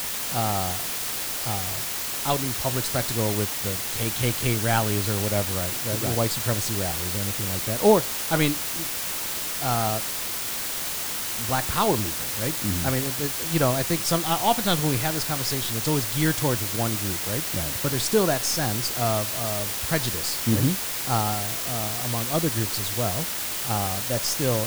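From start to end, the speech carries low bit depth with dither. The samples are held to just 4 bits, and dither was added before rounding, so the quantisation error is spread into steady white noise rather than distortion tied to the signal. The result is a constant, even hiss that sits almost as loud as the speech itself, with the voice clean in shape but heavily masked throughout.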